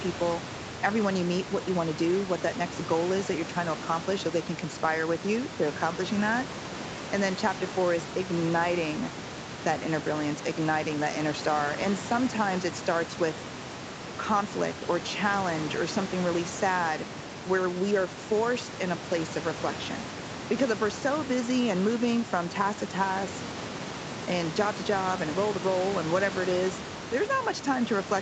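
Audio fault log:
Nothing stood out on listening to this speech recording, which comes through as an ordinary call with room noise sitting about 11 dB below the speech and nothing heard above 8 kHz.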